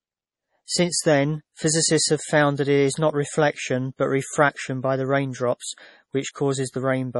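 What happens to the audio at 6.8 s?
At 6.8 s the speech sounds swirly and watery, with metallic chirps on s sounds and nothing above 11.4 kHz, as throughout the clip. This is likely heavy MP3 compression, consistent with about 32 kbps, cutting treble and zeroing weak frequency lines.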